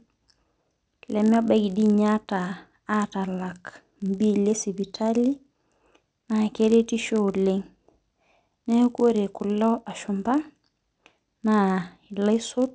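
Throughout the recording, the sample-rate converter restarts on every block, treating each 20 ms chunk in isolation. Its filter never sees the true neighbouring samples at block edges, so each boundary picks up a small error. This is consistent with a conversion from 44.1 kHz down to 16 kHz. With blocks this short, the errors repeat at 50 per second and merge into a buzz that rides on the speech and vanishes in the pauses.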